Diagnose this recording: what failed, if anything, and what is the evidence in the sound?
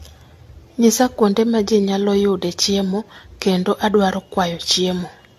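The codec stage failed through generation loss: the speech was likely decoded and re-encoded around seven times, which fits an AAC-LC chain at 64 kbit/s. Each pass requantised on a shifted frame grid. Throughout, the sound is swirly and hollow, attacks blur, and nothing remains above 14 kHz.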